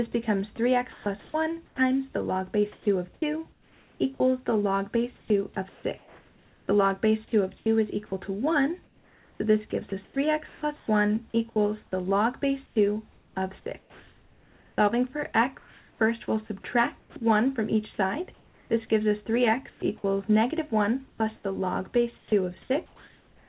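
The sender's voice detector likely kept switching transmission on and off from 0.12 s to the end, so about 6.75 s of sound became comfort noise: choppy, all below a 4 kHz call-path ceiling.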